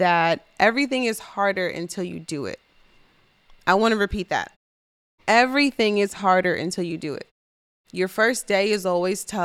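No technical faults can be heard in this speech clip. In the pauses the output fades to silence and the background drops away, then it returns in time for the next sound.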